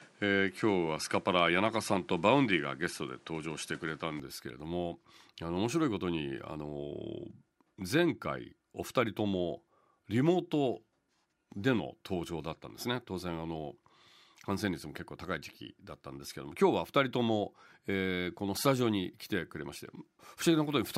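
From 0 to 4.2 s the speech has nothing above 11.5 kHz and carries background noise roughly 30 dB down. At 4.2 s it clears abruptly, with no gap or level jump. That sudden shift in band and noise, unlike a steady filter, likely marks an input switched to a poorer device.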